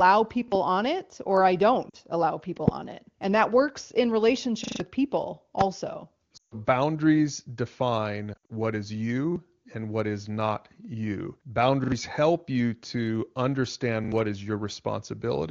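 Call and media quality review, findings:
Repeated buffer, 0.48 s: one quick stutter, a short slice heard twice with a hard join; the device likely replayed its last playout buffer when new audio arrived late, and the slice length fits a 40 ms buffer. Repeated buffer, 4.64–4.80 s, right after "that works in": longer machine-gun stutter, same slice looping several times, roughly 150 ms of audio never heard. Repeated buffer, 9.32 s, just before "and what is not": single stutter, same mechanism. Repeated buffer, 11.84–11.92 s and 14.04–14.12 s (the latter just before "what is"): double stutters, about 70 ms of audio lost in each.

Lost AMR speech frames, 1.89–1.97 s: brief dip and warble. The decoder bridged corrupted frames by reusing the last good pitch and vocal tract settings at falling gain. The length fits two 20 ms frames. Lost AMR speech frames, 6.37–6.54 s: sound drops to near silence within two frames, about 140 ms lost, and returns thin and rough. 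Lost AMR speech frames, 8.34–8.52 s: choppy, intermittent warbling scattered over about 160 ms, with the longest continuous gap around 60 ms.

Loud pop, 2.68–2.70 s: single sharp pop, about 20 dB above the surrounding level, with the sound continuing underneath. This is likely an electrical transient (plug, switch, static or driver glitch) added to the signal path. Loud pop, 5.61–5.63 s: single pop, about 20 dB above the surrounding level. The AMR wideband (HD Voice) codec is carrying a wideband audio band up to about 7 kHz, which is consistent with a high-rate mode.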